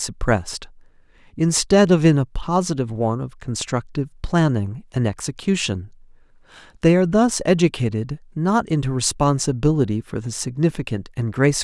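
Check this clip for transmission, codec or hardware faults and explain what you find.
Nothing in the speech points to a transmission, codec or hardware fault.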